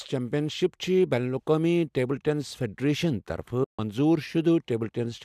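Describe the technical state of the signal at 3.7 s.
AAC frame loss with muting runs from 3.64 to 3.79 s, a 150 ms gap that fits a run of short 10 ms frames from the likely low-delay AAC stream. The decoder zeroed their spectrum, so overlapping windows fade the sound into a soft-edged silence.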